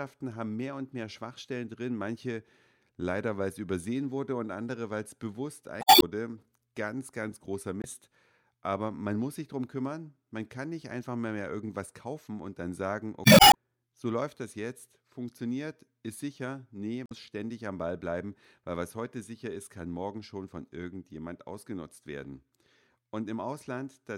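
Damaged data in a compressed stream breaks the speech four times: 5.79–6.03 s after "andere weil es bewusst", 7.79–7.85 s after "ganz großer", 13.22–13.55 s before "so läuft das jetzt", and 17.03–17.12 s. Corrupt frames knock the decoder out of sync, producing chirps, squawks, clicks or short holes. On a spectrogram these appear as smeared broadband blocks, and the waveform shows abrupt discontinuities.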